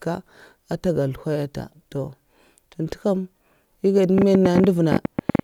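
From 4.18 to 5.40 s a train of clicks runs over the speech, about a dozen per second at an uneven pace, popping well above the signal. It is likely interference or a faulty connection or power supply. The waveform shows sharp repeated spikes, and the spectrogram thin full-height vertical lines.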